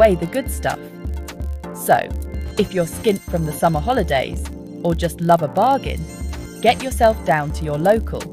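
From start to finish the audio carries a steady buzz at about 43.1 Hz, the signature of a block size mismatch (padded). One stage hands over blocks slightly shorter than the next stage reads, and the remainder of each block is filled with zeros, leaving a brief gap every cycle. The buzz rate fits a 1024-sample read block. Playback runs at 0.999 times normal speed, a negligible slowdown.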